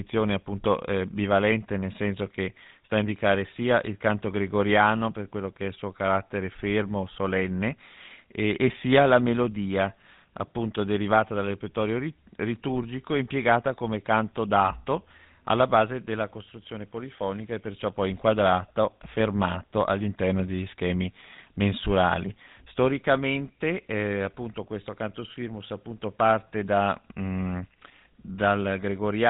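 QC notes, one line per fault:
Throughout: GSM full-rate codec damage on speech, plainly audible. The codec rebuilds the voice from a vocal-tract model driven by sparse, evenly spaced pulses, giving a buzzy, gravelly roughness; nothing passes above 3.9 kHz, so sibilants sound dull. The texture fits a 13 kbps stream.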